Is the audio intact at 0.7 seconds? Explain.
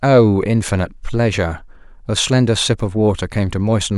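No. At 0.68 s the speech drops into a block of digital silence lasting 2 ms. A short run of samples becomes zeros, with no fade in or out. The abrupt cut and return make a brief tick rather than an audible gap.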